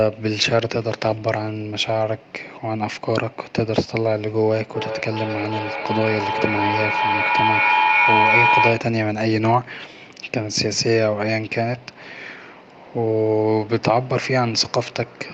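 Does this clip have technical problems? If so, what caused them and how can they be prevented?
Yes: from 4.74 to 9.07 s, feedback echo between two devices makes speech return roughly every 0.4 s, peaking about 3 dB above speech. Keep one device muted or use headphones.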